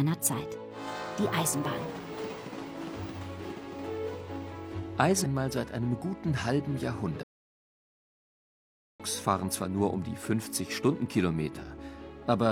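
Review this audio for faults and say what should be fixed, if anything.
At 7.23 s the sound cuts off in mid-flow and stays silent until 9.00 s, a gap of about 1.76 s, before continuing. This is a playback stall, most likely the player running short of buffered data or its output thread being blocked. On a waveform it shows as a flat line between two abrupt edges; on a spectrogram, a fully dark vertical band across all frequencies. Keeping a deeper playback buffer and running audio output on a dedicated, high-priority thread would prevent it.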